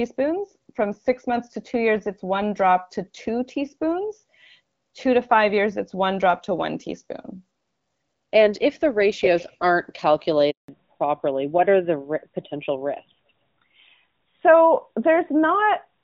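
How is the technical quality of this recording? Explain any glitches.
The call audio has two connected problems near the 10.5-second mark: a short dropout, then a lasting loss of bandwidth. Before that point the sound is wideband, with only light coding roughness consistent with HD Voice at around 12.65 kbit/s.

Handover gap, 10.50 to 10.68 s: the speech fades out within a few tens of milliseconds and leaves about 180 ms of silence before sound resumes. This comes from the phone switching the call between networks. No speech frames were delivered during the switch, so that short stretch of speech is lost entirely rather than muffled or garbled.

Fallback to narrowband, from 10.68 s to the end: immediately after the gap, the speech sounds duller and rougher, with nothing above 4 kHz. The call dropped from the AMR-WB HD Voice codec to the older AMR-NB codec, and the new link's sound fits a rate near 12.2 kbit/s. 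AMR-NB's narrow band cannot carry the upper frequencies that give speech its crispness, so the brightness present earlier is gone.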